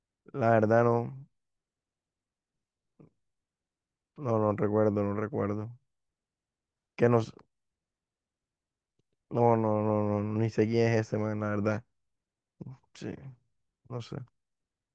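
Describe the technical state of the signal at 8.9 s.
At 8.9 s the speech signal is intact, with no audible fault at that moment.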